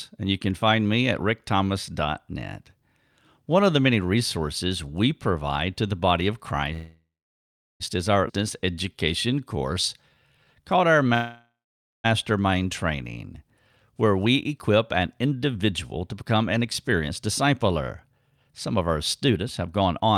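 At 6.73 s, after "to the body of", a call audio freeze holds the sound for about 1.07 s. It decays to roughly 0.75 s of silence, then resumes at "is our" with nothing lost. The likely cause is delayed packets draining the jitter buffer.

A skip ahead at 8.3 s, just after "is our", drops roughly 0.7 s of speech. The two sides are spliced almost directly.

From 8.44 to 11.09 s, a jitter buffer slow-down repeats pitch periods to rebuild reserve. It adds 272 ms, so the speech runs at 90% speed with unchanged pitch and drawn-out sounds.

A second freeze from 11.14 to 12.06 s fills about 0.9 s, including roughly 0.51 s of silence, before the audio continues.

Jitter buffer speed-up then trims pitch periods to cut excess delay. From 14.26 to 17.72 s the speech runs at 107%, and from 18.12 to 20.1 s at 110%. Each stretch loses around 0.2 s and sounds hurried at normal pitch.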